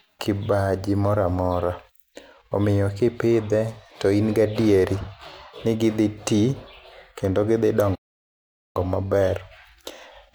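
A playback stall runs from 7.95 to 8.76 s, just after "kendo gidhi": the speech cuts to silence for about 0.8 s, likely because the player ran out of buffered data, then resumes.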